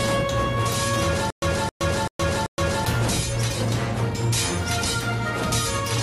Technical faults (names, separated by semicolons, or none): stutter with silent gaps